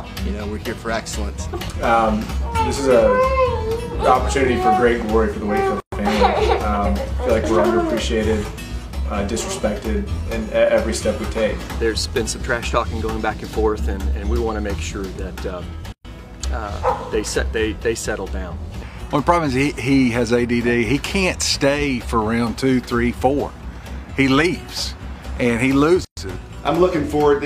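Separately encoded pieces were joined without trimming encoder delay and end padding, so a gap at each join of encoded pieces opens roughly every 10 s: 5.80–5.92 s, 15.92–16.05 s and 26.05–26.17 s, each a gap of about 120 ms with smeared edges before the sound resumes.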